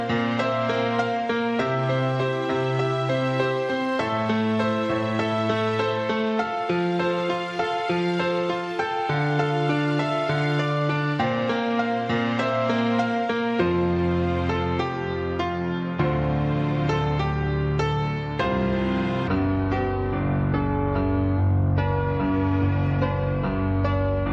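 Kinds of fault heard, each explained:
Wrong sample rate: from 19.28 s the audio drops to about 0.73 speed and roughly 5.5 semitones lower, which fits 44.1 kHz material played back at 32 kHz.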